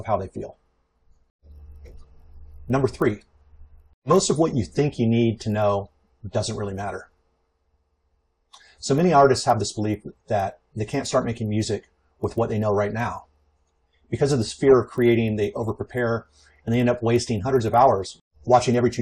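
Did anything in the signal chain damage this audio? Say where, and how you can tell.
Yes: the sample-rate conversion stage has a resampler restarted on every block, going 24 kHz to 48 kHz in 20 ms chunks, so edge errors leave a 50 Hz buzz wherever there is signal, throughout the clip.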